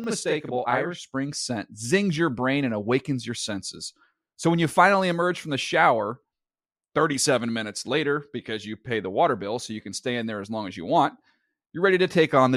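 It's a speech clip with a channel delay (doubling) from 0.0 to 1.0 s: one side runs 40 ms late, so the mono sum gives an audible slap-back double.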